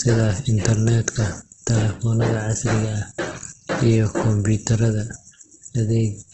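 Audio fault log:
throughout: Opus compression. The speech is rough, grainy and noisy, with nothing above 8.3 kHz. On a spectrogram the energy stops at a hard horizontal edge there. Below it, the bands look smeared and speckled with noise rather than full of holes, because the encoder keeps each band's energy and fills starved bands by folding or with noise. The heavy damage likely comes from Opus in its CELT mode at around 12 kbps.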